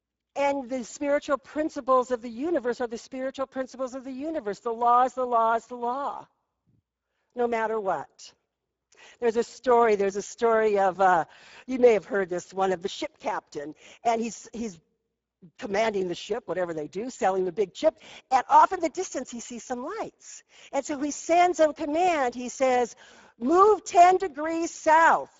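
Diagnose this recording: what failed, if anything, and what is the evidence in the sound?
Speex codec damage runs throughout the speech, at the codec stage. The sound is hoarse and noisy, with nothing above 7.7 kHz. CELP coding short of excitation bits, which fits a bitrate near 10 kbps, roughens the speech and leaves its upper band a noise-like fill.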